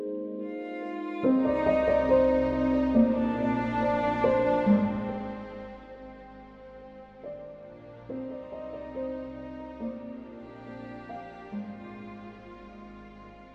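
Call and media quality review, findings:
Zipper noise, 4.8 to 5.96 s. Ticking rides on the sound during a level drop of about 15 dB. Probable component: gain stage. Unsmoothed steps, roughly 100 per second, suggest per-buffer updates. Each step clicks.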